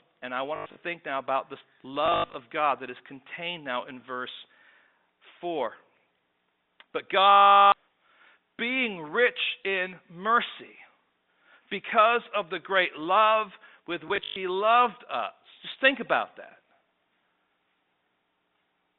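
Packet loss with last packet repeated at 0.56–0.76, 2.06–2.34, 7.3–7.72 and 14.08–14.36 s: the receiver replayed the last packet over each gap. This fits 20 ms packets, giving a 50 Hz robotic stutter that is longest at 7.3 s, within the G.711 telephone band.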